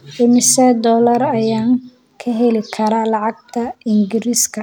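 No technical faults are audible anywhere in the recording.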